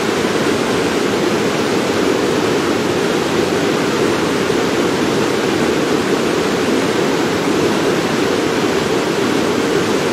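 Listening to these sounds, nothing stood out as technically wrong.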